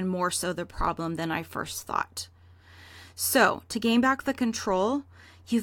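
Listening to this speech recording, nothing technically wrong stood out at any point.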